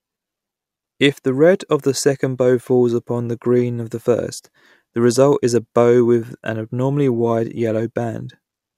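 Listening to this speech recording, nothing stood out as a technical problem at any point.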